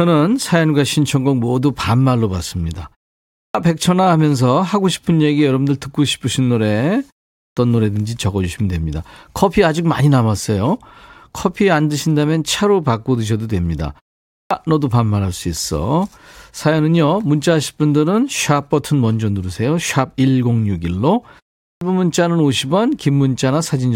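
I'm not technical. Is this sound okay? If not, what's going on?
No, not quite. There's a clipped start after a pause, happening four times: at 3.37, 7.39, 14.32 and 21.63 seconds. Each time the speech comes back after a short gap of about a third to half a second, the first 175 to 185 milliseconds are missing, so the talking seems to jump in abruptly. The playback device dozes off in the quiet and takes a moment to wake up. Going silent in the pauses is normal, though.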